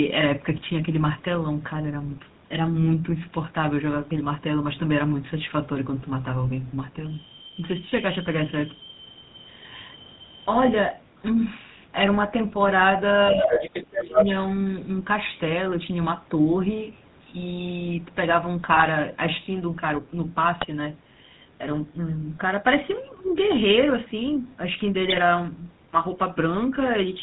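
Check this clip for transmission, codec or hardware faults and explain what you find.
The speech carries four kinds of fault: codec coloration throughout, corrupted frames at four points, and a short stretch around 13.3 to 14.3 s where the far end intrudes and the talker is pushed down.

GSM full-rate codec, throughout: The speech was encoded with the original GSM full-rate codec, and the sound fits its 13 kbps mode. This codec rebuilds the voice from a vocal-tract filter excited by a sparse, regularly spaced pulse train, and it discards everything above 4 kHz. The result is plainly audible here: a buzzy, gravelly roughness and a dull, band-limited top end.

GSM bit errors, at 0.56 to 0.63 s, 18.72 to 18.87 s, 20.61 to 20.66 s and 25.05 to 25.19 s: Corrupted bits reached the decoder, at a rate that sounds like roughly 2 percent. Damaged filter, pitch or gain parameters make the decoder synthesise wrong spectra or sudden level jumps. 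The voice breaks into brief squawks, pops and gargling. The bursts at 18.72 s and 25.05 s are the longest, and each spans several consecutive frames.

Other side's voice leaking through, 13.39 to 14.25 s: The far-end talker, played from the device's loudspeaker, was likely not fully cancelled before reaching the microphone. A second voice becomes audible for under a second, at roughly the same level as the talker.

Speech suppressed in double talk, 13.32 to 13.71 s and 13.89 to 14.18 s: With both sides active, the echo canceller likely could not separate the talker from the loudspeaker echo and attenuated the microphone signal. The talker's voice dips by around 10 dB in the first stretch and about 15 dB in the second, each lasting a few tenths of a second. It sounds pushed back and partly swallowed while the other voice cuts in.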